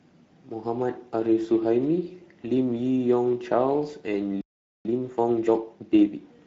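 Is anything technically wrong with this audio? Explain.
Yes, there are three faults.

Throughout the clip, the speech has been through the Speex codec at a setting that leaves the CELP coder few bits for the excitation signal, which fits a mid-range rate of roughly 17 kbps. The coder can't rebuild the fine structure of the voice, so it approximates it with coarse, noisy excitation. The damage is plainly audible: the speech sounds hoarse and grainy, and anything above 4 kHz comes through as a shaped hiss rather than real detail.

From 4.41 to 4.85 s there is a playback stall. The player was most likely starved of data or blocked, so it stopped producing output until it could resume. The speech cuts off abruptly for about 0.44 s of silence, and then carries on from where it stopped.

From 4.85 to 6.37 s there is time-compressed catch-up. After the stall, the player clears its backlog by removing small slices of audio and cross-fading across the joins, which runs the speech at 1.25 times normal speed. 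The pitch stays where it was, but delivery sounds hurried until normal timing returns at 6.37 s.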